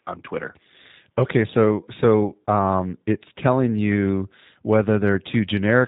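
From start to finish the speech carries G.729 codec damage, and it is plainly audible. The sound has been rebuilt from a vocal tract filter, a pitch predictor and a sparse set of pulses per 10 ms frame rather than passed through as a waveform, which fits the 8 kbit/s G.729A variant. Everything above 4 kHz is gone, so sibilants sound dull and clipped, and the voiced sound takes on a rough, buzzy, slightly synthetic edge.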